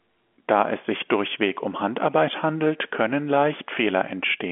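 No faults are audible anywhere in this speech.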